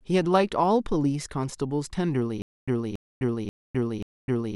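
From 2.42 s to the end of the speech clip, the playback falls into a stutter with silent gaps. A fragment of about 0.28 s repeats four times, each followed by roughly 0.26 s of digital silence, giving an even cycle of about 0.54 s. This is likely a stalled player or stream that replays its last buffered fragment on each retry and then runs dry. The speech that should have followed is lost.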